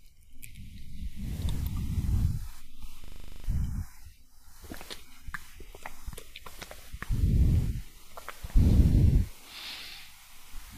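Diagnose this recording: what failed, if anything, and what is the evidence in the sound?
System hang loop, 3.04–3.44 s, driver/buffer stage: one 40 ms slice repeats ten times, a 25 Hz buzz, as hardware recycled a frozen buffer.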